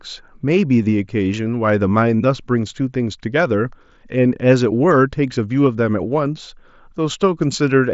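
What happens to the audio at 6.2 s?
Nothing goes wrong at 6.2 s: the speech carries straight through that moment over the Bluetooth mSBC headset path, with its usual wideband ceiling of about 7.7 kHz and no dropout, click or distortion.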